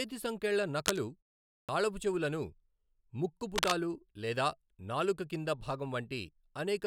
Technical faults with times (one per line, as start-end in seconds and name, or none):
0.81-0.99 cable scratch noise
1.65-1.69 clipped start after a pause
3.55-3.73 cable scratch noise